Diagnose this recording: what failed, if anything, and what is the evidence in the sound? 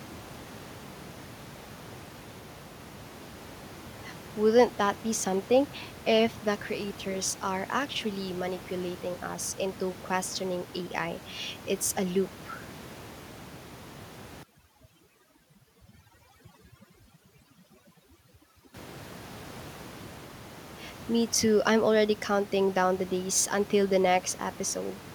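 Overdone noise removal in the call processing stage, from 14.4 to 18.7 s. The room noise, sitting about 16 dB below the speech, drops and breaks up into twinkly specks. The suppressor is too aggressive and is pulling down bands near its noise estimate along with quieter parts of the voice.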